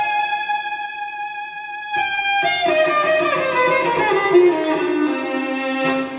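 At 2.15 s a packet arrived late and the jitter buffer ran dry, causing a short stall from a late packet. The last sound is held for 20 ms, with nothing lost, before the audio resumes. At 2.22 s a packet was lost outright, and short concealed packet loss filled the 20 ms gap by extending the preceding sound. This leaves a brief smear or wobble in audio already limited to below 4 kHz by the call path. Between 4.46 and 4.66 s a loud pop, likely an electrical transient such as a plug or switch, puts two sharp pops about 5 dB above the signal, while the audio continues underneath.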